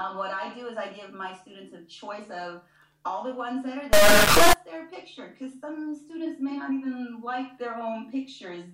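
From 3.93 to 4.53 s, an integer read as float fault turns the sound into an extremely loud, buzzing square wave. This fits 32-bit integer samples being read as 32-bit float values.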